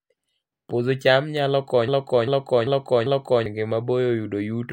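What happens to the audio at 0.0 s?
At 0.0 s the audio is intact, with no dropout, click, distortion or other fault at that moment.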